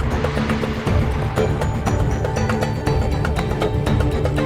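No technical faults are audible.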